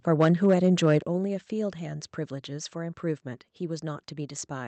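From 0.2 to 0.98 s the loudest syllables crackle with a harsh, flattened edge, the tops of the peaks sheared away on a small share of samples. This is likely microphone overload, with the input driven about 5 dB past the converter's ceiling.

At 1.02 s the whole speech drops suddenly by about 8 dB, background included, in a single step right after the distorted stretch. This sounds like the microphone volume stepped down by the call software reacting to the overload, though that cause is inferred.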